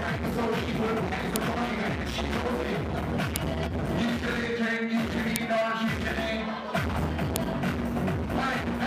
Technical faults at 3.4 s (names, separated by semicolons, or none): file header played as audio